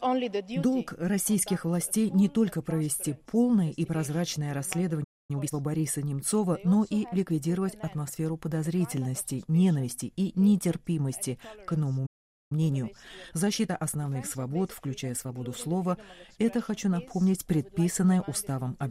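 At 5.03 s the audio cuts out for about 0.25 s, and at 12.06 s it does so again for about 0.44 s. These are playback stalls, most likely the player running short of data or having its output thread held up, so nothing reached the output until it recovered. Each time, the sound simply stops mid-flow and there is a plainly audible gap before it resumes.

After each gap the player works off the backlog that built up during the silence through time-compressed catch-up. It trims small slices from the stream and cross-fades across the joins, so the audio plays faster while keeping its normal pitch. From 5.31 to 5.55 s it runs at 2.0 times speed, a brief rush. From 12.52 to 15.52 s it runs at 1.1 times speed, a milder hurry that lasts three seconds.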